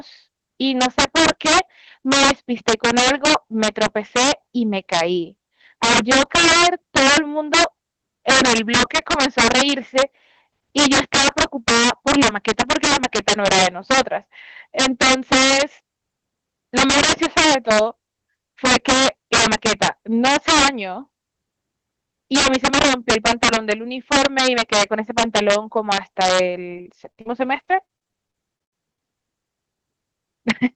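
Integer overflow runs through the whole speech clip. The loudest peaks drive about 10 dB past the top of the integer range. Instead of being limited, those samples wrap around to the opposite sign. Each one jumps across the full scale in a single step. Roughly one sample in twenty is affected, so the peaks carry harsh, violent cracks. They are far sharper and uglier than ordinary clipping.

Repeated packet loss, heard as robotic sound, runs from 26.77 to 29.01 s. The sound points to more than a dozen short dropouts packed into this stretch. The longest gap is 80 ms. Each hole is patched by stretching the last bit of sound. About 478 ms is filled this way and about 520 ms is simply missing. That leaves a choppy stutter with pieces gone. Concealment covers about 22% of the span. Only about a fifth of a second is really rebuilt. The Opus call path at 24 kbps sets the audio's upper edge at 8 kHz.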